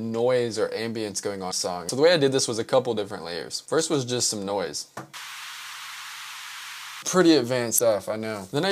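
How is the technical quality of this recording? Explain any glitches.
The recording has two short glitches from damaged data in a compressed stream. They occur at 1.48 to 1.53 s and 7.75 to 7.80 s. Each lasts about 55 ms. Corrupted bytes make the decoder misread frames and lose sync. It then hunts for the next frame header. The result is a brief chirp or blip.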